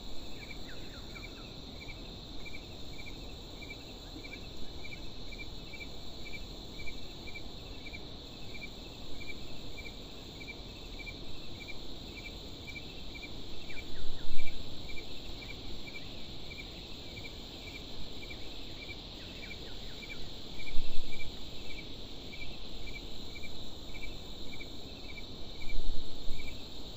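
A recording of everyday sounds, affected from start to finish by stereo read as mono. The interleaved left and right samples have been taken one after another as a single channel, so each stereo frame spans two mono sample periods. Everything plays at half speed and sits a full octave, 12 semitones, below where it should, and a fainter mirrored copy of the material shows up in the upper half of the spectrum.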